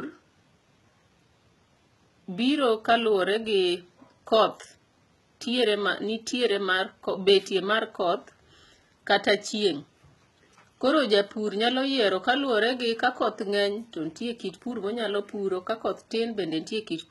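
From start to finish the speech carries heavy HE-AAC compression damage, likely from a very low bitrate around 16 kbps. Treble is rebuilt from copied lower bands and stops near 11.8 kHz, so harmonics misalign above the crossover and s sounds come out gritty, metallic or lispy.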